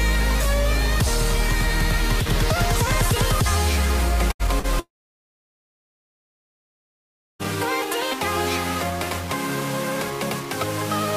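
Throughout the clip, a grainy, gritty distortion rides on the sound and changes with it, with quiet passages breaking up worst. The likely cause is low bit depth without dither, rounded to a coarse grid that points to about 4 bits, leaving error around 20 dB below the signal. A waveform would show visible staircase steps, and a spectrogram a broadband haze tracking the signal's level.

From 4.31 to 4.42 s, a burst of packet loss removes 80 ms. The receiver stretches the last sound into a short held buzz or hiss that fades, then jumps ahead. A spectrogram would show smeared, repeated bands ending in a discontinuity.

From 4.60 to 4.67 s, short concealed packet loss fills a 40 ms hole with a continuation of the preceding sound before blending back. It is heard as a brief smear or wobble, visible as a slightly blurred, too-regular patch on a spectrogram.

From 4.80 to 7.42 s, the audio carries on as a fading buzz or hiss, then drops to silence for about 2.5 s before returning further along, with 2.6 s missing. 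This is likely a long network dropout, showing on a waveform as a flat gap after a brief decaying tail.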